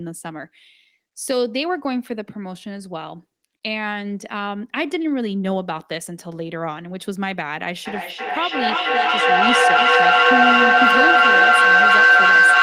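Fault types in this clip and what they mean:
Feedback howl: From about 7.86 s a tone near 1.5 kHz swells out of the speech and keeps climbing until it sits about 11 dB above the talker, pulsing roughly every third of a second, and it is still sounding when the clip ends. A microphone is picking up a nearby loudspeaker carrying the same call, and each pass around that loop adds level, so the repeats grow and narrow to the band the loop favours instead of fading.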